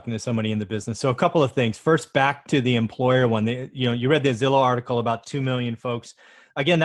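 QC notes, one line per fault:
Throughout: clock drift between sender and receiver. The sender's clock is running about 2% slow, so the jitter buffer keeps draining and the receiver has to pad things out. That brings small timing hiccups at uneven intervals all through the clip.
0.12 to 6.78 s: repeated timing corrections. The receiver keeps slipping in tiny repeated pieces to stay in step, stretching the sound to about 98% speed and adding roughly 150 ms overall. The edits are small and irregularly spaced.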